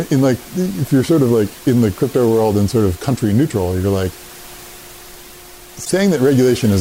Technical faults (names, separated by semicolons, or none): repeated frames